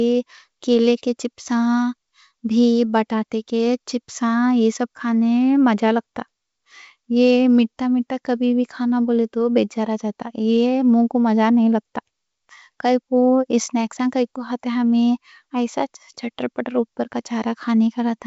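No technical faults occur anywhere in this speech, which comes through G.722 wideband telephone coding at 64 kbit/s.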